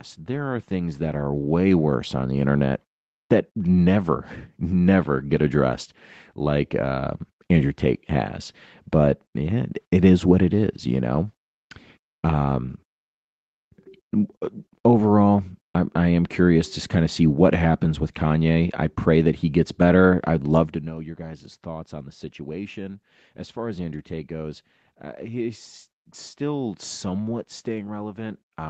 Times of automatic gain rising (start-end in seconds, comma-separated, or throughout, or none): 0.26-2.46, 21.17-28.70